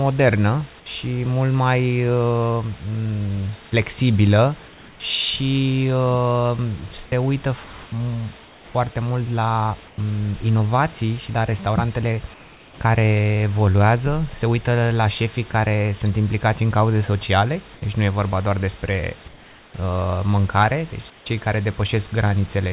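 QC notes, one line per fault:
4.68–5.0 s, 7.64–8.74 s (after "se uită"), 9.88–9.98 s (just before "um inovații și la"), 12.34–12.8 s (after "inovații și la restaurantele"), 17.74–17.82 s, 19.28–19.74 s, 21.1–21.26 s, comfort noise in place of the background: in these pauses the room background, about 25 to 27 dB below the speech, turns into a smooth, featureless hiss about 2 to 4 dB quieter, then the real background returns when speech resumes. The likely cause is discontinuous transmission, where the sender goes quiet in pauses and the receiver synthesises roughly matched noise.
15.52–15.54 s, sound dropped by the voice detector: a 20 ms sliver of the speech vanishes into the same flat synthetic noise, a brief clipped-off moment rather than a clean pause. The likely cause is the voice detector misreading that bit of sound as background and halting transmission.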